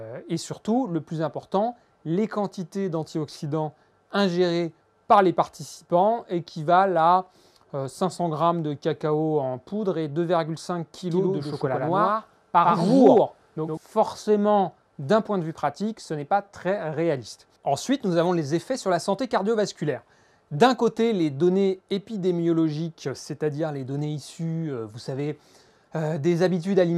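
From 11.11 to 13.77 s there's a doubled audio track. A second full-band copy of the sound runs about a tenth of a second behind the first, at roughly the same level, with no decay or room colour. It cuts in and out abruptly at those two points. The likely cause is the same audio being captured again through a slower path, or an edit leaving two copies out of step.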